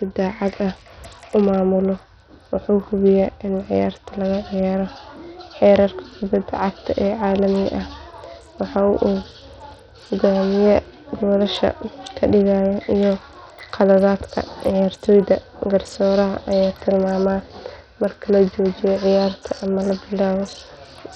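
It's a speech clip with heavy Bluetooth SBC compression throughout, likely a low bit pool around 64 kbps: gritty, flickering treble and nothing above 18.1 kHz.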